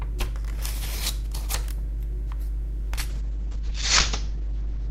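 A call bitrate drop hits this recording of everyday sound at 3.1 s and lasts to the end, about 1.8 s. The encoder, starved of bits, codes coarsely and cuts the top end from about 20 kHz to 8 kHz, leaving a rough, muffled sound consistent with a fall to a very low bitrate.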